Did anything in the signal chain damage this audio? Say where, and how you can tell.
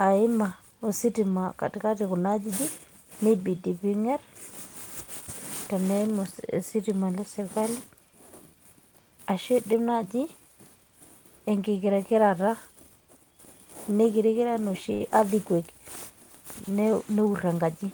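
Yes. The damage is at the network stage, in the receiver's jitter buffer. A short stall from a late packet occurs between 14.93 and 15.01 s. One packet arrived too late and the buffer ran dry. The receiver held the last sound for 68 ms to bridge the gap. You hear a stretched sustain with a slight buzz or dip. Then the speech resumes exactly where it left off, so nothing is lost. The cost is 68 ms of added delay.

A jitter buffer speed-up runs from 17.10 to 17.53 s. The buffer held more audio than its target. The receiver trimmed tiny pitch-period slices, one after another, to drain the excess. It removed about 40 ms in total. Speech plays at 108% speed while the pitch stays the same. The result is a brief, hurried rush in the final second.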